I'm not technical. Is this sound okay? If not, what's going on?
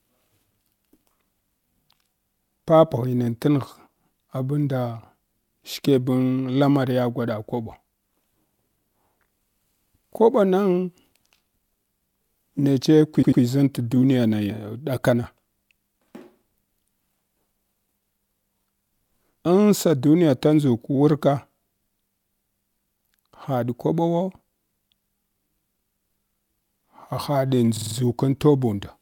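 No. The speech has repeated frames: a short chunk of the stored audio was saved more than once, so it stutters. From 13.21 to 13.41 s a 96 ms chunk plays twice more. From 27.76 to 27.95 s a 48 ms chunk plays four more times. Each stutter adds 0.19 s.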